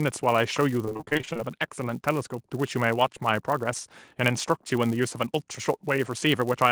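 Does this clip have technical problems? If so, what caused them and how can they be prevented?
Yes. A filter restarted on every block runs throughout: its state resets each block, so a tick repeats at 188 Hz, which fits a 256-sample block. Prevent it by carrying filter state across block boundaries.

Repeated packet loss (robotic sound) occurs from 0.85 to 1.41 s. Gaps up to 28 ms, filled by extending the previous sound, leave about half that span concealed and choppy. Prevent it with a steadier network path, a larger jitter buffer, or forward error correction.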